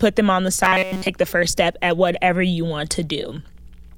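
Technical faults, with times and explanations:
0.64 to 1.09 s, robotic sound from repeated short buffers: the speech becomes a rigid metallic buzz pitched near 188 Hz, likely because audio arrived too slowly and a chunk of about 5.3 ms was replayed over most of this stretch while real audio was skipped.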